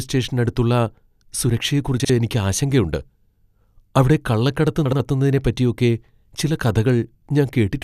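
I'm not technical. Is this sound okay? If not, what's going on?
No. This speech clip has frames out of order twice: at 2.00 to 2.10 s, and at 4.85 to 5.00 s. Each time, two tiny neighbouring pieces of sound, about 0.05 s each the first time and about 0.07 s each the second, got swapped and played in swapped order, giving a brief garbled flutter. Unlike a dropout or skip, nothing is missing and no time is lost. Unlike a stutter, nothing repeats. The same sound just plays in the wrong order.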